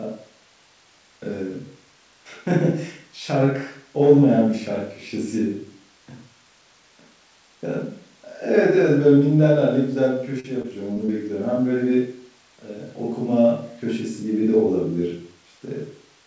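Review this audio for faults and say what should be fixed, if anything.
Between 10.40 and 11.10 s the speech turns choppy and robotic, with small pieces dropping out. This is repeated packet loss (robotic sound). Four separate gaps, the longest 39 ms, were each bridged by continuing the preceding audio, and together they fill roughly a seventh of that stretch. A more stable network link, a deeper jitter buffer or forward error correction would prevent it.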